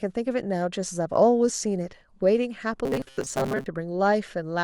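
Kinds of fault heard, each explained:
Robotic sound from repeated short buffers: From 2.85 to 3.67 s the speech turns into a hard, metallic buzz. It carries a fixed 134 Hz buzz yet still roughly tracks the syllables. The likely cause is audio arriving too seldom, so the software loops a tiny slice, about 7.5 ms long, to fill each gap. Most of this stretch is repeated material rather than real speech. The loop rate sets that steady buzz.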